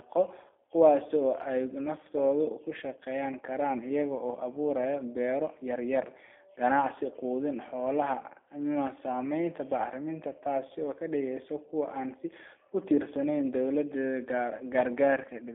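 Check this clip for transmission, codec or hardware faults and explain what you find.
Two kinds of fault are present: codec damage throughout and two brief packet-loss dropouts.

G.729 codec: For the whole clip the speech has the rough, slightly synthetic quality of a low-rate model-based coder. The voice is rebuilt from a vocal tract filter, a pitch predictor and a few pulses per frame. Fine detail is lost. The sound fits an 8 kbit/s G.729A link. The band is confined to roughly 300 Hz to 3.5 kHz, so it sounds thin and boxy.

VoIP packet loss concealed by the speech codec: At 10.68 to 10.72 s and 14.58 to 14.64 s the voice briefly smears. Each gap fits one lost 20 ms packet. The decoder filled the hole by repeating its last pitch and filter at falling gain. That briefly stretches the sound. Because each frame depends on the previous one, the speech stays weak or distorted for a few tens of milliseconds after each gap.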